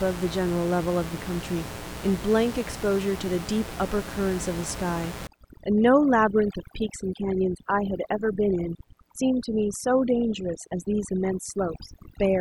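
From the start, a mains buzz runs under the speech: a raspy, steady tone built on 60 Hz and its harmonics, sitting roughly 15 dB below the speech. Sharp switching spikes from a dimmer, rectifier or unshielded line are getting into the signal path twice per mains cycle, spraying harmonics up into the kilohertz range.

At 5.27 s, overdone noise removal takes hold and continues to the end of the clip. The reduction is set so hard that any frequency band close to its noise estimate is pulled down or muted, and the quieter parts of the speech are cut along with it. The room noise, which sat about 13 dB below the speech before this point, drops and breaks up into twinkling artefacts.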